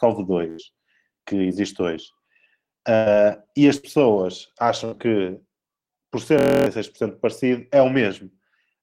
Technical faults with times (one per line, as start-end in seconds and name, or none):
0.49-0.74 burst of packet loss
2.96-3.09 burst of packet loss
3.78-3.86 burst of packet loss
4.85-4.94 burst of packet loss
6.39-6.66 system hang loop